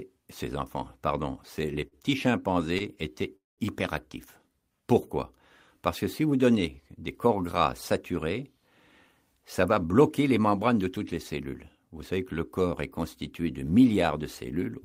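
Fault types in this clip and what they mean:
Short stall from a late packet: A packet arrived late and the jitter buffer briefly ran dry. The receiver held the last sound until it came. At 1.87 to 1.95 s a sound stretches by 44 ms, and at 2.78 to 2.83 s by 20 ms. Nothing is lost.
Call audio freeze: From 3.36 to 3.61 s the sound stops and a 216 ms gap opens, about 180 ms of it silent. The audio then resumes where it stopped, with nothing missing. Packets held up on the way, emptying the jitter buffer, are the likely cause.
Jitter buffer speed-up: From 9.68 to 10.40 s the sound runs at 108% speed with unchanged pitch and feels hurried. The buffer held too much audio, so the receiver trimmed many tiny pitch-period pieces, about 70 ms in total, to cut the delay.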